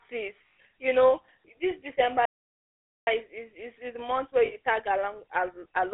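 Throughout, the speech carries the buzzy, gravelly roughness of the GSM full-rate codec, squeezed into a 300 Hz to 3.5 kHz band, consistent with 13 kbps.

At 0.48 to 0.59 s, lost GSM frames hold the voice as a metallic ring for about 100 ms rather than leaving silence.

From 2.25 to 3.07 s the sound drops to true silence for about 0.82 s, a playback stall, likely from the player running out of data, with no ringing tail.

Between "is the month where" and "tag along", lost GSM frames at 4.46 to 4.55 s again produce a brief rough, metallic hold of about 60 ms.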